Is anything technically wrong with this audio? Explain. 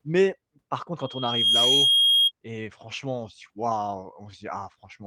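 Yes, there are two faults.

From 0.99 to 2.32 s, after "mais par contre", a loudspeaker feedback squeal: a 3.2 kHz tone swells over about half a second to roughly 10 dB above the speech. The microphone is re-amplifying its own loudspeaker.

At 4.03 s, after "franchement on se dit", a brief rough, noisy 20 ms patch, consistent with one lost packet rebuilt from error correction using the next packet's low-bitrate copy.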